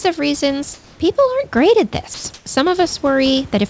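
At 0.02 to 0.04 s, just before "of reasons", 20 ms of sound drop out. This is sound dropped by the voice detector. The detector likely judged the onset to be background. Steady noise briefly replaces it.

From 0.74 to 1.00 s, between "of reasons" and "aren't great at", comfort noise replaces the background. Sending likely paused. The room's textured noise turns flat and featureless, about 2 dB quieter, for 260 ms.

At 2.14 to 2.24 s, right after "aren't great at", the voice detector drops sound again. It likely cut a word ending. Flat noise fills the 100 ms gap.

From 2.34 to 2.46 s, comfort noise again stands in for the background. It likely follows another pause in sending. This time the fill is about 6 dB louder than the real room noise. It sounds like a brief, even hiss.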